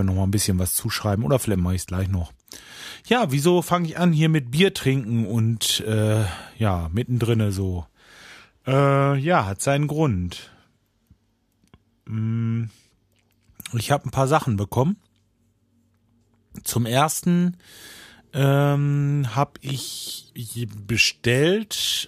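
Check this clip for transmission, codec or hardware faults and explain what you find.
Two blocks of digital silence interrupt the speech, at 0.84 s and 1.86 s, lasting 5 ms and about 7 ms. Samples were replaced by zeros, likely because the output buffer was not filled in time. The sound drops to silence and returns with no fade, giving a brief tick at each.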